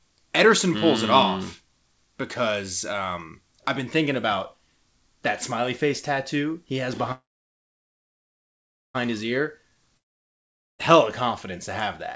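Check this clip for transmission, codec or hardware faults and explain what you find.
The speech passes through a wideband call codec, with nothing above 8 kHz, consistent with G.722 at 64 kbps. Two transmission faults interrupt it.

Call audio freeze, 7.12 to 8.96 s, right after "face tattoo he has": the last sound is stretched into a brief fading buzz, then about 1.7 s of silence before the speech resumes exactly where it stopped. Nothing is lost, but roughly 1.8 s of extra delay has been inserted. The likely cause is packets held up in transit, leaving the jitter buffer empty until they arrived.

Long network dropout, 9.97 to 10.81 s, just before "confidence to have that": again a short decaying tail, then about 0.8 s of silence. This time the speech returns further on, so roughly 0.8 s of audio is simply gone rather than delayed. That points to packets that were likely lost outright, so the receiver had nothing to play for that stretch and skipped ahead once the stream recovered.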